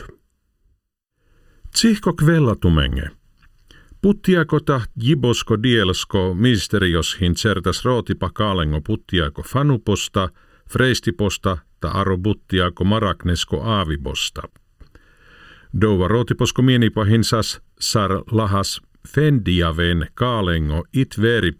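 Throughout the speech there is channel delay (comb filtering): one channel arrives a little under a millisecond late, and when the two are summed to mono, sound common to both cancels at evenly spaced frequencies, the first near 700 Hz and then roughly every 1.4 kHz above it. The result is a hollow, phasey tone that never moves. On a spectrogram this appears as steady, evenly spaced dark horizontal bands across the whole clip.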